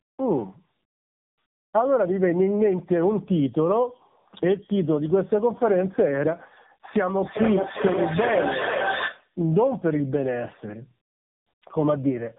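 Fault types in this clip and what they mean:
Tandem speech coding: The audio sounds like it went through several speech coders in a row, likely around three, each one decoding and re-coding what the last had already damaged. The errors stack, so the whole clip comes across rougher, more muffled and more warbly than a single narrowband link would make it. There's also nothing above about 3.8 kHz, which fits a telephone-band chain with a low-rate mobile codec in it.
Feedback echo between two devices: From 6.98 to 9.35 s the speech starts coming back at itself roughly every 0.4 s. That's the sign of two devices on the same call in one room, with one device's loudspeaker feeding the other's microphone. Neither echo canceller can remove sound played by the other device, so the loop stays open. The loudest repeats reach about 0 dB relative to the speech, so they're as loud as the original talker.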